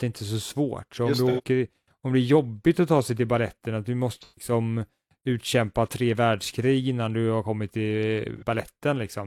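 AAC frame loss with concealment strikes at 1.29–1.42 s after "om du", 4.21–4.52 s after "till baletten att du", and 8.38–8.43 s. Missing frames are rebuilt from the last good spectrum, producing smeared, phasey patches that appear as blurred, streaky blocks on a spectrogram.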